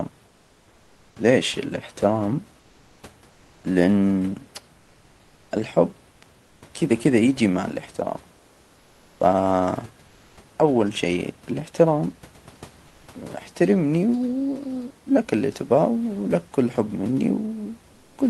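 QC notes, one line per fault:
0.27–1.15, 2.59–3.03, 6.11–6.21, 6.43–6.61, 8.37–9.19, 10.07–10.37, 12.87–13.07 and 17.93–18.17 s, comfort noise in place of the background: In each pause between speech, the real room noise drops out. A smooth, even hiss replaces it. That hiss is up to about 3 dB quieter, and the room's texture returns when speech resumes. The gaps run from 100 to 880 ms. The sender likely stopped sending during silence through Opus DTX, so the receiver filled the pauses with synthetic noise.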